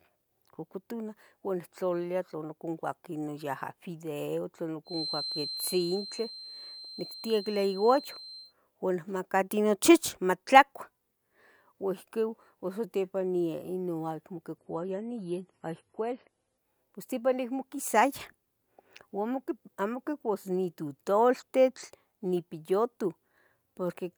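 From 4.84 to 8.54 s, a loudspeaker-to-microphone loop likely sits at the edge of feedback, causing a feedback whistle: a thin, steady 4.1 kHz tone about 10 dB under the speech, swelling and fading slowly in level. From 14.58 to 16.58 s, the adaptive stream drops to a lower bitrate, consistent with MP3 falling from 128 to 32 kbit/s. Nothing above 11.4 kHz remains, codec artefacts rise, and the change is abrupt but gapless.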